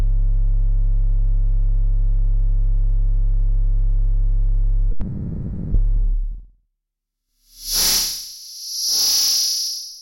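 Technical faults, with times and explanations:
4.91 to 5.76 s, long network dropout: likely a stall in arriving audio; about 0.6 s never played, with 830 ms filled by a fading continuation before the sound resumes.
5.87 to 7.29 s, jitter buffer speed-up: the receiver trimmed short pitch-period pieces to shed roughly 100 ms of backlog, so sound runs about 7% fast at unchanged pitch.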